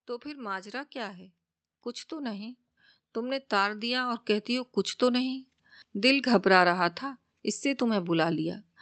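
The speech swells twice, voice and background rising together: by about 4 dB from 0.22 to 1.27 s, then by about 10 dB over a slower climb from 2.08 to 5.52 s. This is automatic gain rising, where the gain control judged the input too quiet and gradually turned it up. The call path's band limit near 8 kHz is present throughout.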